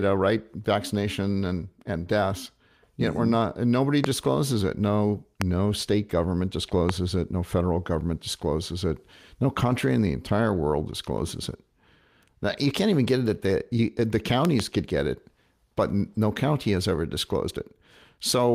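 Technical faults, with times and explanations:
4.04–4.06 s, 5.42–5.44 s, 6.89–6.91 s: loud pop. Three single sharp pops, the first just after "we're not nobody" and the second just before "state government", peaking about 20, 20 and 15 dB above the speech, which continues underneath. Each is a brief voltage spike, likely from a switch, connector or static discharge, added to the signal and shaped into a short click by the downstream circuitry.
14.45–14.62 s: loud pop. A double pop, about 15 dB above the speech, between "at the you the" and "could get it but".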